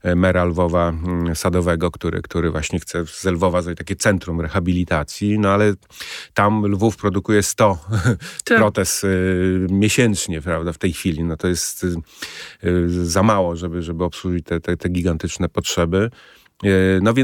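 Speech recording, no technical faults detected anywhere in the clip.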